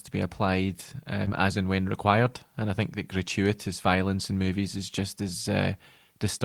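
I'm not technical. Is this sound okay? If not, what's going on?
No, there is a small glitch in this speech clip, lasting about three hundredths of a second, at around 1.25 to 1.28 s.

It starts with a short concealed packet loss at 1.25 s. A small piece of the call arrived too late to be played. For about 10 ms the receiver covered the gap by stretching the sound just before it, then faded back into the real audio. You hear a brief smear or tiny wobble rather than a silent hole. This differs from the repair described next because nothing real is being played here, only a guess built from what came before.

Right after, from 1.26 to 1.28 s, the remaining 20 ms is a lost packet rebuilt from error correction, which points to a single lost piece. The next piece of the call carried a rough backup copy of the missing one, and the receiver played that copy. Unlike the smear just before it, this part is the actual sound, only rougher and noisier for that instant. 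Together the two make one short blemish.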